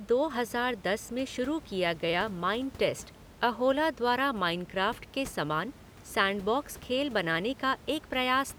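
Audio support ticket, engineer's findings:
No faults found on this speech clip; the only thing underneath is the room's own background noise, sitting about 21 dB below the speech, which belongs to the recording rather than the system.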